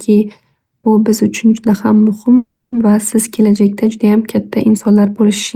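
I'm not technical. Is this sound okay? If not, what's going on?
No. There's a call audio freeze from 2.37 to 2.74 s: the speech stalls, the last sound stretches into a fading buzz and then silence, and after about a third of a second it resumes where it stopped. Likely the call's data was briefly held up.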